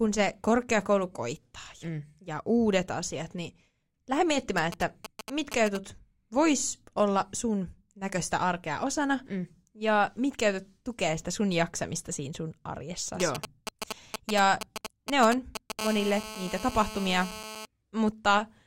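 From 4.58 to 5.77 s and again from 13.2 to 15.81 s, GSM signalling bursts from a nearby 2G phone are rectified by the audio circuit, giving a galloping dit-dit-dit of short 217 Hz buzzes, louder in the second stretch. From 15.81 to 17.65 s the phone enters a call, producing a steady GSM phone buzz: a hard, raspy 217 Hz tone rich in harmonics at about -12 dB relative to the speech.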